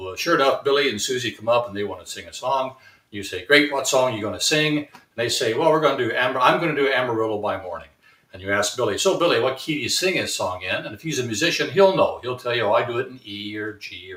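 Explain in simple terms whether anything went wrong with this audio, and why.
Yes, something went wrong. A noise suppressor was applied to music or sounds it wasn't built for. Throughout the clip it mistakes steady, sustained parts for background noise and keeps pulling them down. Sharp onsets pass through, but held parts and tails sink, so the level pumps and thins.

In five places the sound was cut by the noise suppressor much harder than elsewhere: 1.97–2.36 s, 2.71–3.14 s, 4.86–5.18 s, 7.8–8.34 s and 13.14–13.29 s. Each time the sound briefly ducks and hollows out for a fraction of a second, then recovers.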